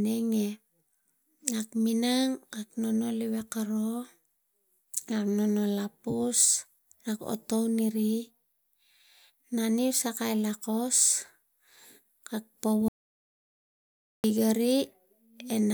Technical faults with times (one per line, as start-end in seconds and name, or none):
12.88-14.24 audio dropout to silence